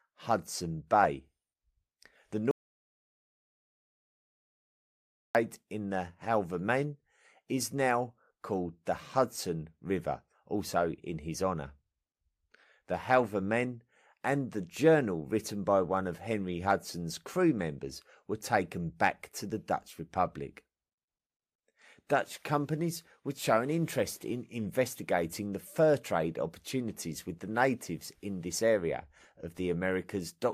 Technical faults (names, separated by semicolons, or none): audio dropout to silence